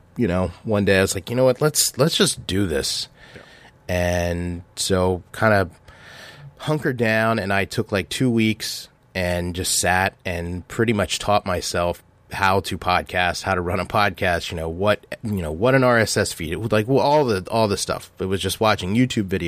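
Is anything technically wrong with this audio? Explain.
No, nothing technically wrong can be heard here.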